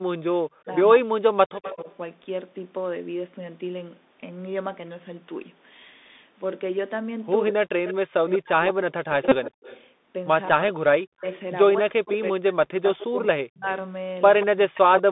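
The whole recording carries the Bluetooth CVSD headset codec. Each sample is coded as a single up-or-down step whose size adapts, and the line is squeezed to roughly 200 Hz to 3.7 kHz. Sibilants come out scratchy, loud bright sounds distort where the step cannot keep pace, and a fine granular hiss sits beneath the speech. A spectrogram shows a hard ceiling near 3.7 kHz with nothing above it and a faint grainy floor between syllables.

From 0.0 to 1.87 s the talker's level collapses in pieces, falling as much as roughly 40 dB. The affected stretches add up to about a second and a half. This is speech suppressed in double talk: the echo canceller, likely faced with both ends talking at once, could not separate the near voice from the loudspeaker return and attenuated everything. On the waveform the envelope shows sudden deep notches.

Overlapping that, from 1.65 to 1.96 s, comes an echo leak. 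A faint copy of the voice trails 179 ms behind it at about 15 dB below the direct sound. It is likely residue that the far end's echo canceller, working from a loudspeaker, failed to remove and sent back. The spectrogram shows a weaker duplicate of the formant pattern shifted 179 ms to the right.

The echo leak returns from 7.46 to 12.16 s with the same 179 ms lag and the same level of about 15 dB down. This time it is a longer, ghostly doubling. Inside it, from 7.5 to 9.55 s, double-talk suppression strikes again, carving the voice into dips that reach roughly 40 dB.

At 9.29 to 9.36 s a Bluetooth headset packet repeated event occurs. About 30 ms of audio was lost, which fits a run of roughly eight headset packets, and the chip replayed the last packet's bits in their place. The result is a short, steady buzz near 267 Hz. On a spectrogram it appears as evenly spaced horizontal harmonic lines. 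The waveform shows an identical 3.75 ms segment tiled end to end.

From 10.52 s to the end, suppression returns for roughly three seconds in total, with the same gouges of up to about 40 dB. A final echo leak appears from 13.23 to 14.46 s, again a delayed copy 179 ms behind the voice and about 15 dB below it.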